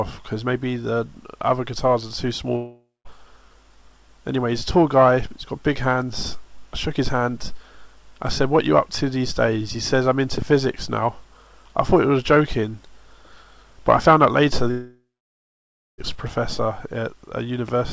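From 2.56 to 3.07 s there is a long network dropout. About half a second of audio never arrives. The receiver carries the last sound forward as a fading buzz, and the final 0.19 s or so is plain silence. The sound then resumes, with the missing part gone. The likely cause is lost packets on the link.

From 10.38 to 10.44 s, a loud pop sounds twice in quick succession, about 10 dB above the audio. The sound continues underneath. This points to a sudden voltage step, such as a switch or a driver glitch.

From 14.71 to 16.14 s comes a second, longer network dropout. About 1.28 s of audio is lost. The concealment buzz decays, leaving roughly 0.95 s of near-silence before the audio comes back. Packet loss is the likely cause again.

From 17.68 to 17.71 s, a single loud pop rises about 5 dB above the sound. It has the same sharp, electrical character, likely from a brief voltage spike. Throughout, the G.722 call codec leaves nothing above 8 kHz.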